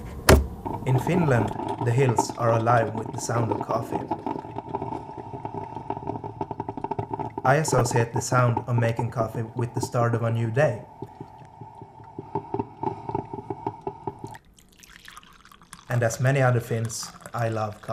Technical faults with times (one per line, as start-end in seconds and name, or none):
7.39-8.89 periodic USB or driver dropouts
7.65-7.89 DAB burbling
9.24 DAB burbling